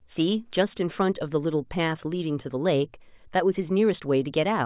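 No technical fault can be heard anywhere in this speech recording. Nothing in the sound points to any stage of the chain going wrong.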